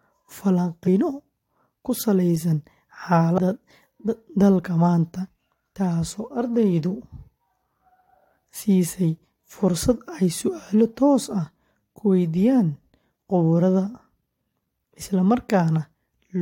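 At 3.37 s the speech lurches forward, losing about 150 ms of sound in a single step. These are compressed frames skipped. The decoder never played a run of frames, either because they were missing from the file or because it rejected them as damaged. The jump fits around seven frames of roughly 23 ms each.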